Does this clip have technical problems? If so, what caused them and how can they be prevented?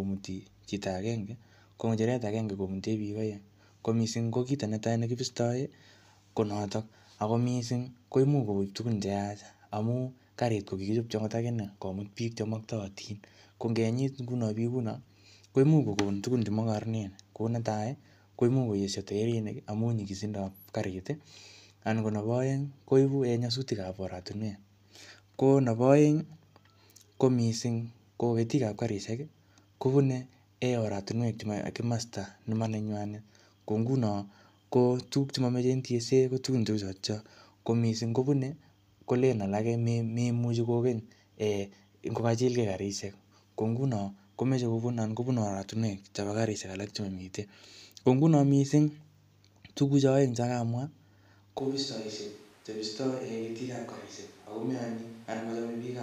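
Yes. From 51.59 s to the end, the speech suddenly turns roomy and hollow, about 10 dB quieter, with less bass and room noise only about 25 dB below it. This is likely a switch to a distant microphone after the close microphone's signal dropped out. The waveform steps down abruptly, and the spectrogram shows thinner low frequencies over a raised noise floor. Prevent it by monitoring the close microphone throughout the recording and keeping a backup close mic running.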